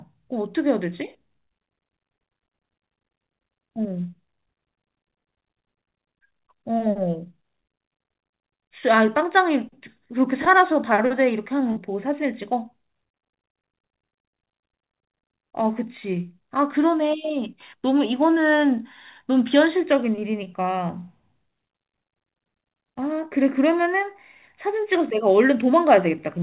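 At 11.72 s and again at 20.44 s you get short concealed packet loss, about 40 ms and then 20 ms of audio that arrived too late. The receiver papered over each gap by extending the previous sound, so both come across as a quick smear or wobble.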